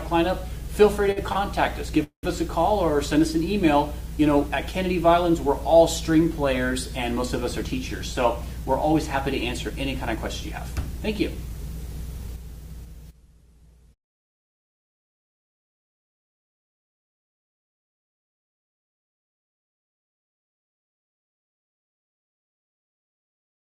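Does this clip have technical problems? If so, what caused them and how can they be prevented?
Yes. At 1.11 to 1.18 s and 1.32 to 1.37 s there are short stalls from late packets. The jitter buffer ran dry and the last sound was held for about 50 ms and then 30 ms before continuing. Nothing is lost, unlike a dropout. A deeper jitter buffer would absorb such delays.

From 2.03 to 2.25 s there is a call audio freeze. The sound stretches into a fading buzz or hiss, then about 110 ms of silence, adding roughly 196 ms before resuming where it stopped. This is longer than a stall and ends in silence. The likely cause is packets held up in the network, which better network prioritisation for the call could prevent.

Between 7.97 and 9.16 s and again from 9.57 to 11.50 s, jitter buffer speed-up plays the audio at 105% and then 106% speed, removing roughly 70 ms and 150 ms. Pitch stays the same, which distinguishes this from resampling. 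Gentler, slower buffer-reduction settings would avoid it.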